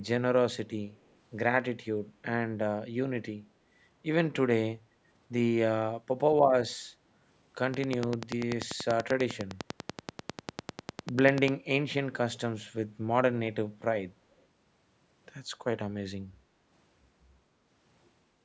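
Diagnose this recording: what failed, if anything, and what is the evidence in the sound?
Echo leak, 0.91 to 1.16 s and again 14.32 to 14.44 s: a very faint copy of the speech trails the original by 208 ms both times. The far end's echo canceller, likely with a loudspeaker feeding its microphone, let residual echo slip through the call processing.

Train of clicks, 7.74 to 11.49 s: about forty evenly spaced, same-shaped ticks at 10.2 per second, peaking well above the speech and audible in pauses. The steady pulse train likely comes from interference coupling into the analogue wiring or a faulty connection or power supply.

Background gated by the echo canceller, 16.44 to 16.7 s: the room sound dips by about 6 dB for roughly a third of a second, then recovers. In the call processing stage, the canceller pulled the microphone down hard while the loudspeaker played.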